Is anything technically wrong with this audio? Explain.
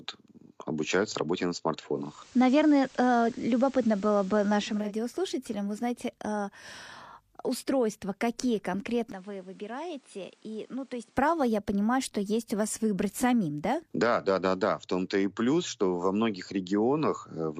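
Yes, there are two faults in this speech recording.

Digital radio blending to analogue, from 1.93 s to 4.96 s. The receiver lost the digital stream and cross-faded over about 355 ms to the station's FM broadcast, then returned. During that stretch the level shifts by about 4 dB, and a layer of FM hiss appears, roughly 30 dB below the speech.

Input switched to a poorer device, from 9.12 s to 11.16 s. The sound abruptly narrows and drops by roughly 10 dB, with no gap at the changeover. A fresh background noise sits roughly 30 dB below the speech for those two seconds before the fuller sound returns. This pattern is most likely the recorder jumping to a different, lower-grade microphone mid-take and then back.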